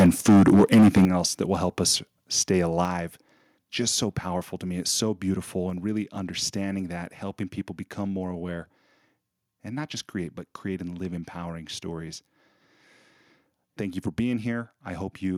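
It's a speech recording, and right from the start to about 1.05 s it's in microphone overload: the input is driven roughly 10 dB past the converter's ceiling, so around a fifth of the samples get their tops sheared flat, giving the loudest syllables that harsh, crackly edge. The likely cause is simply the mic input set too hot. You can also hear the microphone volume stepped down three times, each an abrupt drop in both voice and background: about 2 dB at 0.06 s, a big one of about 10 dB at 1.05 s, exactly where the distortion stops, and about 4 dB more at 2.85 s. That pattern likely comes from the call software reacting to the clipping and pulling the device's input gain down in single steps until the level sat low enough.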